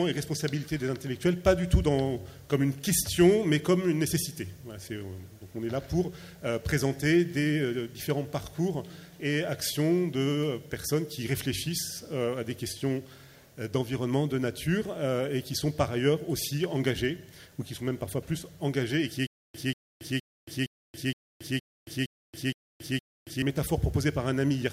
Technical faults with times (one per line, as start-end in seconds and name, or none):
19.27-23.42 stutter with silent gaps